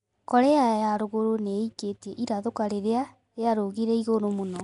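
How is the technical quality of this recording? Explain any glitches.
Compression damage is plainly audible throughout. The speech has a rough, hissy halo, a smeared underwater quality, and nothing above 10.6 kHz. The likely cause is Nellymoser compression, the old Flash microphone codec, at a rate that sounds like about 44 kbps. It spreads a fixed bit budget across short blocks and fills starved bands with noise, which gives a grainy hiss rather than the watery warble typical of MP3.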